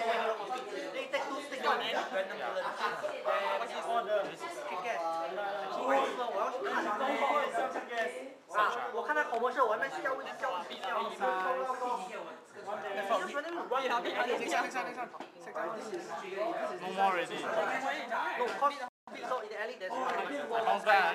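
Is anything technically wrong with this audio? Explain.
Yes, there are two related faults. A playback stall at 18.88 to 19.08 s cuts the sound off for about 0.19 s, likely because the player ran dry or its thread was blocked. Time-compressed catch-up follows from 19.08 to 20.34 s, where the player trims and cross-fades small slices to clear its backlog, hurrying the audio to 1.15 times normal speed at unchanged pitch.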